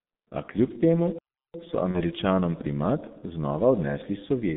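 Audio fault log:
Throughout: G.723.1 codec. The audio is confined to a telephone band of roughly 150 Hz to 3.7 kHz, and the heavy damage points to a very low rate, around 6.3 kbit/s. Nothing above 4 kHz survives, and the voice model refreshes only every 30 ms, so consonants smear and the tone turns hoarse and muffled. The smearing and hoarseness separate it from simple band-limiting, which would dull the sound without roughening it.
1.91–2.03 s: VoIP packet loss concealed by the speech codec. Just before "primat znova", the sound is briefly stretched out and fades rather than dropping to silence. The decoder repeats its last pitch and filter with falling gain, which fits a single lost 30 ms frame. The sound stays weak for a short while after the frame returns, and this lingering recovery, rather than a clean gap, marks it as codec concealment and not a plain dropout.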